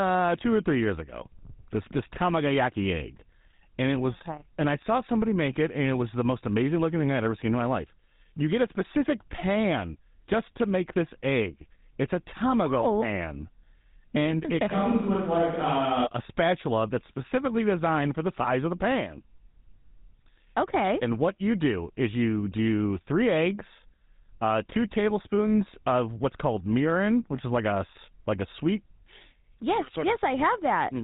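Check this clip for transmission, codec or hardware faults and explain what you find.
GSM full-rate codec damage runs throughout the speech. Nothing above 3.8 kHz survives. The codec models the vocal tract and drives it with a sparse, regularly spaced pulse excitation, which fits a 13 kbps stream. That leaves a plainly audible buzzy, gravelly roughness on the voices.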